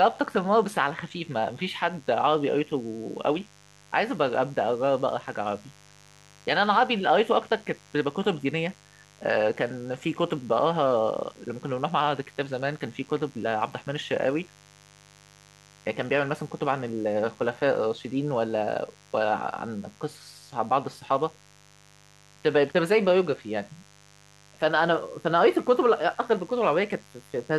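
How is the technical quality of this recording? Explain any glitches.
The recording carries a mains buzz from start to finish. Interference from the 50 Hz supply, probably sharp spikes from a dimmer, rectifier or poor shielding, leaks in and stacks up harmonics into the kilohertz range, leaving a steady, raspy buzz roughly 30 dB under the speech.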